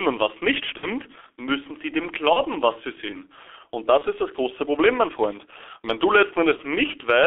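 G.723.1 codec damage runs through the whole speech clip. The low-rate coder, at a rate that fits roughly 6 kbit/s, rebuilds each 30 ms frame from a coarse voice model, so the sound is muffled and hoarse and consonants smear. The line band confines everything between about 300 Hz and 3.4 kHz, leaving no air or low body.

VoIP packet loss concealed by the speech codec strikes first at 0.77 to 0.88 s, between "und was nicht" and "müssen sie dem". About 60 ms went missing, which fits two lost frames. The decoder kept repeating its last pitch and filter at falling gain, so the gap turns into a fading buzzy tone or coloured noise. Shorter single-frame losses of about 30 ms follow at 2.33 to 2.40 s (after "müssen sie dem", before "was sie sehen"), 3.98 to 4.03 s, and 6.56 to 6.60 s just after "wenn du". Each leaves a brief smear and weakened sound as the decoder recovers.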